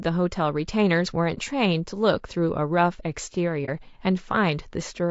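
Low-delay AAC compression runs through the whole speech clip. The voice sounds rough and grainy, with noise filling the spaces between the pitch harmonics and a thin, synthetic-sounding top band. This is likely AAC-ELD, the low-delay codec of video calls, whose very short frames cannot separate closely spaced harmonics well and spend bits inefficiently. At a rate fitting about 32 kbps, that shortfall is plainly audible.

AAC frame loss with muting appears at 1.34 to 1.39 s and again at 3.65 to 3.70 s. Each time the sound dips away and returns, leaving a brief dip of roughly 50 ms. The decoder zeroed the spectrum of a missing frame, and the overlapping windows on either side smoothed the edges into a fade. The gap fits a single lost frame of about 30 ms.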